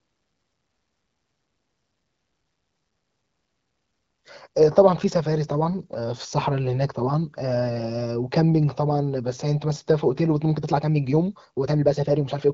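From 10.5 s to the end at about 12.5 s, the speech suddenly runs about 1.47 times faster while its pitch holds steady: a time-stretched section. It sounds rushed, likely because software squeezed that stretch to fit a set length by dropping short slices. A spectrogram shows syllables and pauses abruptly compressed, with harmonic spacing unchanged, all beneath the HD Voice band edge near 7.5 kHz. The waveform shows tighter envelopes with small discontinuities at the splice points.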